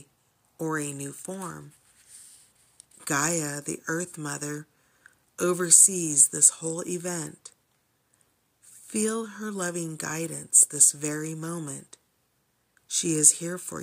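Nothing goes wrong anywhere in this recording; there's simply no technical fault to point to.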